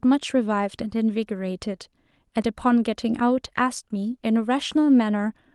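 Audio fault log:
No faults are present in the signal, which shows only the ordinary coding character and upper band limit of a working call path, consistent with Opus limited to about 12 kHz.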